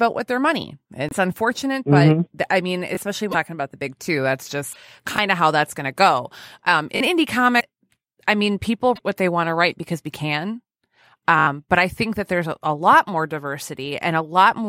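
At 1.09 s the speech breaks for about 40 ms, likely a broken MP3 bit reservoir, where a frame after a gap decodes against another frame's bytes. The same fault recurs at 3.31, 4.72, 7.59 and 8.95 s. Repeated buffers, with a 20 ms block replayed because fresh audio arrived late, give a click-like stutter at 2.95 and 5.16 s. At 6.96 s the block plays twice more, and at 11.39 s it plays four extra times as a short buzz, skipping about 70 ms.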